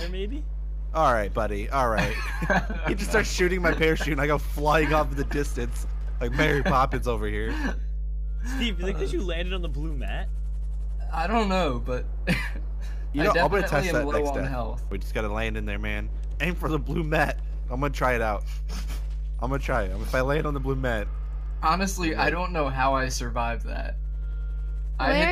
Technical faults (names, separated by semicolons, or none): mains hum